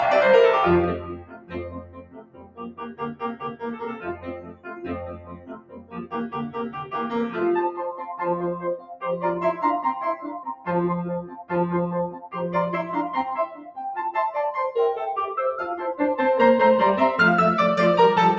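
Noise suppressor applied to music or sounds, throughout: a suppressor built for speech treats the music's sustained parts as noise, so the level pumps in swings of around 15 dB. Sound cut by the noise suppressor at 0.98–3.63 s, 3.83–4.89 s, 5.05–6.14 s, 6.48–6.93 s, 8.78–9.03 s, 11.25–11.51 s, 12.12–12.32 s and 13.5–13.77 s: held sound and decays sink by about 11 to 16 dB, deepest in the first three stretches and at 11.25–11.51 s, leaving the music thinned and fluttering.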